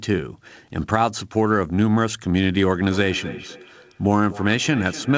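A second device in the room is playing the call back into a nearby microphone, and neither echo canceller can remove it, creating feedback echo between two devices from 2.91 s to the end. The sound returns roughly every third of a second, thinner and ringing, peaking about 16 dB below the speech, over audio already band-limited at 8 kHz.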